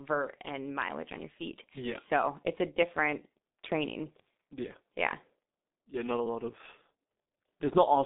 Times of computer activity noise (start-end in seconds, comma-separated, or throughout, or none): none